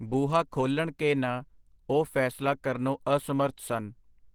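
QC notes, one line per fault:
Throughout: Opus compression, plainly audible, with the speech sounding hoarse and grainy, likely from the codec's hybrid speech mode at a rate that fits 16 kbps. Unlike MP3, there is less swirling and fewer spectral holes, and content still reaches about 20.2 kHz.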